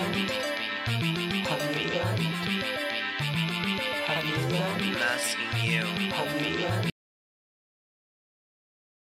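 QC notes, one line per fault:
6.90–9.13 s, audio dropout to silence. The music cuts off abruptly at 6.90 s and the clip runs to its end in silence, with no room tone or decay. The input was likely lost, with the recorder still writing silence.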